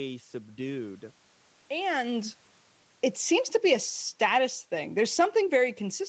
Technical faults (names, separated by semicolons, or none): automatic gain falling